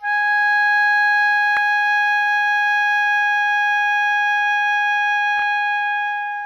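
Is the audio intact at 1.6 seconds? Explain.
No, at 1.57 s the music has a tiny click, a repeated buffer: audio arrived late, so a 1.45 ms chunk, fitting a 64-sample buffer, played twice with a hard join.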